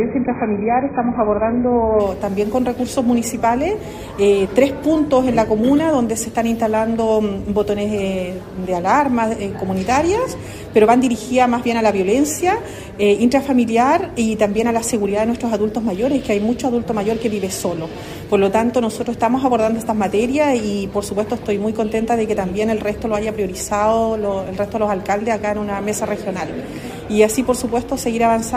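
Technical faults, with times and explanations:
0.00–2.00 s, adaptive stream starting at a low bitrate: nothing is heard above 2.5 kHz and codec artefacts are stronger, which fits a very low-bitrate stream near 12 kbit/s. At 2.00 s the player measures the connection and switches seamlessly to a fuller rendition, consistent with about 96 kbit/s.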